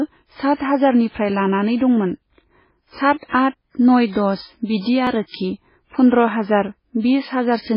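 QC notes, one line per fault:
Throughout: MP3 compression. The sound is dull and watery, with the treble cut and swirling artefacts, likely from heavy encoding at a very low bitrate near 16 kbps.
5.07 s: dropped buffer (overrun). A small forward jump, likely from a few milliseconds of samples being overwritten before collection, so both sides are joined directly.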